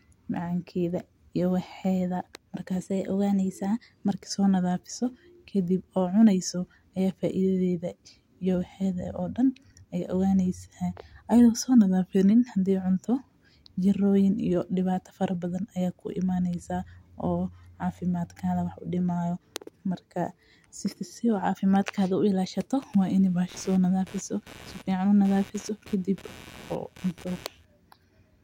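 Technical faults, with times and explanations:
2.81–4.10 s, 11.78–12.31 s and 23.34–23.91 s: drift correction step. In the first segment, ending just before "soo nadhamiso kadib oo", the speech runs about 6.1% fast and sits about 103 cents sharp, roughly a semitone. In the second and third it runs about 6.1% slow and about 109 cents flat. Each shift begins abruptly. The likely cause is clock-matching software changing the playback rate in a single step to refill or drain its buffer. On a spectrogram the harmonic stack jumps up or down as a block and then returns. On the waveform the periods compress or stretch for the span.
22.82–27.65 s: computer activity noise. A buzzing, chirping texture pulsing at about 150 Hz sits around 25 dB below the speech and fluctuates independently of it. Processor, graphics or mouse load shifts the shared ground of the audio circuit, and those current changes reach the signal. 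On a spectrogram this shows as a comb of lines at multiples of about 150 Hz that persists through pauses and varies in strength. On the waveform it appears as low-level ripple in the gaps.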